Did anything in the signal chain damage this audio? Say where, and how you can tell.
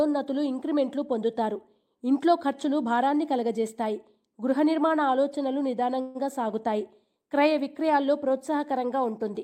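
Yes, at the network stage. A call audio freeze runs from 6.01 to 6.17 s. The sound smears into a fading buzz or hiss, then resumes 135 ms late. The likely cause is delayed packets emptying the jitter buffer.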